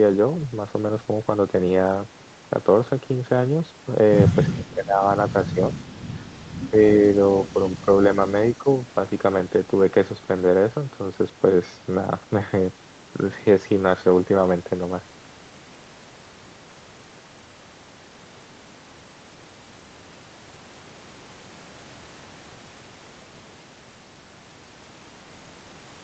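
At 4.49 to 5.03 s the speech drops sharply, by roughly 20 dB at its deepest, for about half a second. Shorter, shallower dips follow at 6.7, 7.53 and 8.58 s, the first and last by about 10 dB and the middle one only slightly. The pattern is speech suppressed in double talk, most likely an echo canceller mistaking the talker for far-end echo while both sides spoke. The whole clip stays band-limited at 8 kHz.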